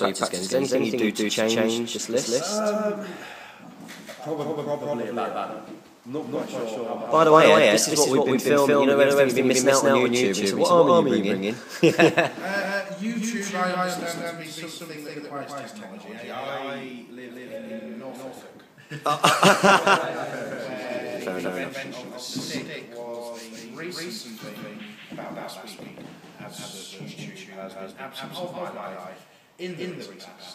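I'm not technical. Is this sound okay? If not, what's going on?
No. A doubled audio track runs throughout: an identical, equally loud copy trails about a fifth of a second behind, likely from being recorded twice. Unlike an echo, it never fades or sounds roomy.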